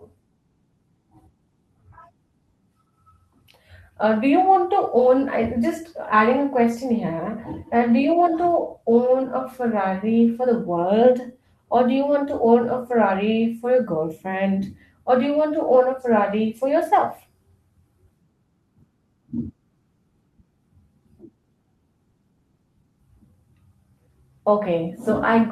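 No technical fault can be heard anywhere in the speech recording: level, timing and continuity stay intact throughout.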